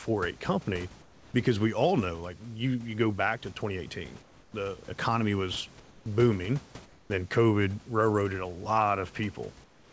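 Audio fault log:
1.02–1.34 s, 4.22–4.54 s, 5.80–6.06 s, 6.86–7.10 s and 9.64–9.92 s, comfort noise in place of the background: in each speech pause, lasting 0.24 to 0.32 s, the room's textured background gives way to a smooth, steady hiss about 3 to 6 dB quieter. This is likely discontinuous transmission, with the receiver synthesising noise during silence. On a spectrogram, the grainy background becomes a flat, even wash capped at 8 kHz. On the waveform, the noise floor steps down and then jumps back when the speech resumes, except in the last pause, which runs to the end of the clip.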